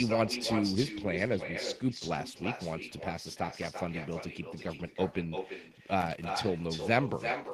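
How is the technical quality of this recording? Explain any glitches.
The recording has two clear technical faults: an uncancelled echo that runs through the whole clip, and a short burst of connector crackle near the end.

Echo with no canceller is present from start to finish. Every phrase of speech is followed roughly a third of a second later by a second copy, about 7 dB quieter, that sounds thinner. This is the far end's loudspeaker output being picked up by its own microphone and sent back across the link with nothing subtracting it. The delay corresponds to the network round trip.

Loose connector crackle appears from 6.00 to 6.40 s. For about 0.4 s the audio breaks into irregular crackle and scratching. A worn or dirty contact is rapidly making and breaking, chopping the signal on and off, and any DC present on the line turns each break into a click. The burst is short and irregular rather than periodic, which distinguishes it from a steady hum or buzz.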